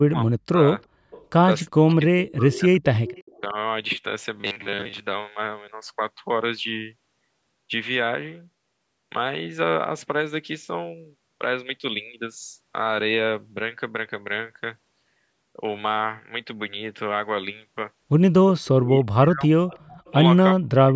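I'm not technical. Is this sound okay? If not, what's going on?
No, there are three problems.

Speech suppressed in double talk: when both sides of the call likely spoke at once, the echo remover couldn't tell this voice from the other side and turned it down. The voice dips deeply or drops out at 0.06 to 0.58 s, 1.69 to 2.85 s, and from 18.76 s to the end, and dips only slightly and briefly at 3.41 to 3.56 s.

Echo leak: a speakerphone's echo remover likely failed to catch everything its microphone heard and sent some back. You hear a faint copy of the voice arriving about a third of a second late, at 0.80 to 1.27 s, 3.06 to 3.41 s, 18.59 to 18.68 s and 19.74 to 20.12 s.

Robotic sound from repeated short buffers: from 4.36 to 5.01 s, new audio likely arrived too rarely, so the software kept replaying tiny slices, around two-thirds of that stretch. This turns the voice into a steady metallic buzz at 100 Hz, which fits slices 10 ms long.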